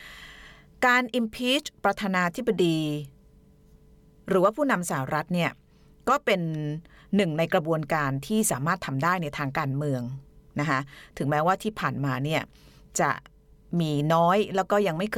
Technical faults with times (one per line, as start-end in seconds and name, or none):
none